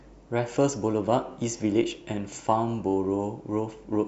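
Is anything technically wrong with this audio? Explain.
No, nothing is technically wrong with this speech recording. No technical fault can be heard at any point in it.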